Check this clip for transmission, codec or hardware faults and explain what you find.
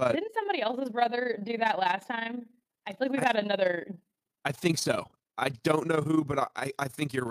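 There's one fault, and it runs through the whole speech clip: overlap-add ripple. The frames were windowed and stitched back together with an overlap that doesn't add up to a steady gain, so the level dips about 11 dB once per frame, roughly 30 times a second, giving a rough, fast flutter.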